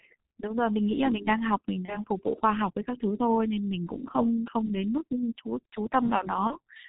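G.723.1 codec damage runs through the whole clip. The speech is squeezed into 30 ms frames at a very low rate, which fits a 6.3 kbit/s stream. Nothing reaches past 4 kHz, so the speech sounds heavily muffled and hoarse, with smeared consonants.

VoIP packet loss concealed by the speech codec appears at 1.85 to 2.05 s and again at 6.47 to 6.56 s. Each gap fits a single lost 30 ms frame. The decoder fills it by extending its last pitch and filter at falling gain, which gives a brief, fading stretch. The speech stays weak or distorted for a while after each gap.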